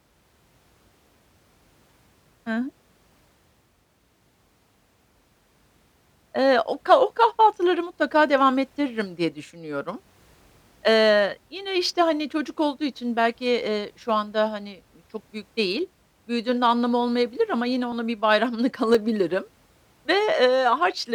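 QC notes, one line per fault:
17.92 to 20.98 s: periodic USB or driver dropouts after "anlamı olmayabilir ama yine", about four ticks every 1.02 s as sub-millisecond slivers of audio get skipped.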